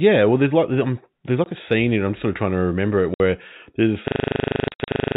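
Speech, carried at telephone bandwidth with nothing above 4 kHz, is broken by sudden dead gaps with hard edges at 1.44 to 1.46 s (20 ms), 3.14 to 3.20 s (60 ms) and across 4.68 to 4.88 s, where about 140 ms of silence is scattered in runs of up to 60 ms. This is packet loss filled with silence. The receiver played nothing where audio never arrived, and the hole lengths in steps of 20 ms fit a 20 ms packet size.

From 4.08 s to the end, the sound freezes into a rattling stutter at 25 Hz as one 40 ms fragment repeats exactly, about 27 times. This is a system hang loop. The machine or driver stalled while the audio hardware kept replaying the same ring buffer, so roughly a second of real audio is never heard.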